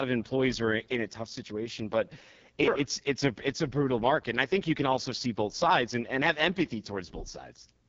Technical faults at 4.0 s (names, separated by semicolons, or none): AMR wideband (HD Voice) codec